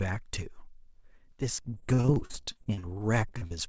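Speech in a call recording with two kinds of network damage. From 1.62 to 2.85 s there is repeated packet loss, giving a robotic sound. Some eighteen holes open in that stretch, the longest about 47 ms. Each one is patched by stretching the last sound forward. About 37% of the span is this patched sound, so the voice turns choppy and robotic, with pieces missing. Then come three cases of short concealed packet loss, at 3.29 to 3.35 s, 3.38 to 3.43 s and 3.47 to 3.52 s. Each hole is a few hundredths of a second. The receiver fills it by continuing the prior sound, from its pitch or as shaped noise, then blends back. Each is heard as a brief smear or wobble. The call codec path leaves nothing above 8 kHz, which fits G.722.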